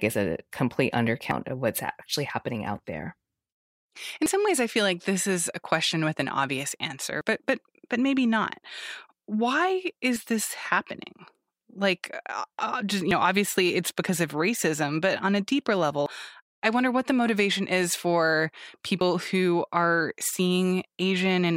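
A recording path that likely works in 3-second chunks drops roughly 50 ms each time one chunk closes and the next opens, and the two sides are butted together with no silence. This is audio missing between chunks, heard as a skip in the speech at 1.31, 4.26, 7.21, 10.16, 13.11, 16.06 and 19.01 s. The skips come every 2.95 s, the chunk length less the lost piece, and each removes a brief stretch of the speech.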